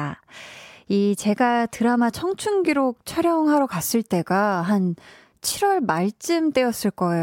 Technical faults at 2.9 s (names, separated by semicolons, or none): none